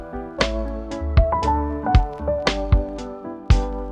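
No technical faults are audible in this audio.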